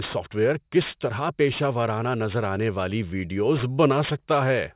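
Aliasing throughout: resampling to what sounds like 8 kHz skipped the anti-alias filter, folding energy above 4 kHz back down as gritty, metallic sibilants.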